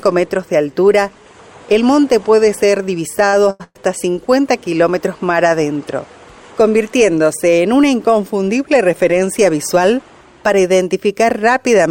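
From 3.25 to 3.82 s the audio drags and hiccups through four brief stalls, each one holding and smearing the last sound rather than dropping out, the longest lasting about 115 ms. These are repeated stalls (stutter): packets arrived late or too slowly, so the jitter buffer kept running dry, and the receiver stretched the previous sound to cover roughly 257 ms in total, about half that stretch, before resuming. Nothing appears to be lost, only delayed.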